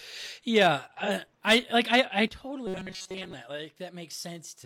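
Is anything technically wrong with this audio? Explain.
Yes, there are three separate problems in this speech clip.

First, at 1.03 to 1.10 s there's AAC frame loss with concealment. About 43 ms of audio, consistent with a single lost frame, went missing, and the decoder patched the gap by reusing the last good spectrum with its phase and sign detail scrambled. What you hear is a brief smeared, noisy, phasey blip where the speech should be clean.

Next, right after "I like I I", at 2.28 s, there's a sudden gain jump. The level drops by about 10 dB in a single step and stays down through the end of the clip. Because it applies to everything at once, the speech and the background noise fall together, with no fade. The likely cause is a digital gain change, such as a setting or bit shift, applied instantly without a ramp.

Finally, from 2.67 to 3.33 s you get robotic sound from repeated short buffers. 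The speech turns into a rigid metallic buzz pitched at 188 Hz that still loosely follows the speech. That buzz frequency fits a buffer of roughly 5.3 ms being replayed over and over. Most of that stretch is repeated material, so the real audio underneath is largely skipped. This points to audio arriving too late and the software looping the last buffer to fill time.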